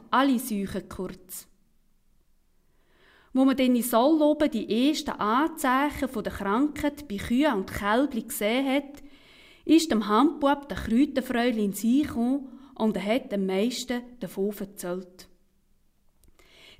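At 8.95 to 8.97 s a short, irregular burst of loose connector crackle cuts through the audio: a worn or dirty contact makes and breaks, chopping the signal. Its ragged, uneven texture separates it from a single clean digital click.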